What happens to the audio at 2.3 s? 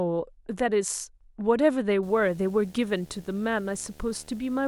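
A video or display buzz runs from 2.03 s to the end: a screen or video cable couples into the audio, adding a 75 Hz field-rate buzz with hash, roughly 25 dB under the speech.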